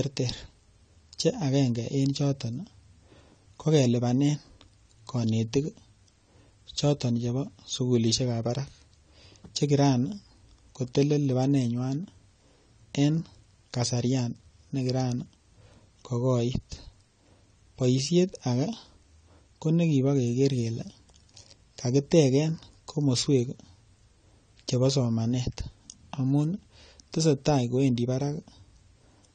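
The speech sounds dull and smeared from start to finish, with nothing above 9 kHz and a warbling, fizzy texture on sibilants and sustained sounds. The likely cause is AAC compression at a low bitrate: the encoder has pulled its cut-off down and starved the upper spectrum, leaving gaps or noise-filled bands. The clearly audible damage fits AAC-LC at around 32 kbps.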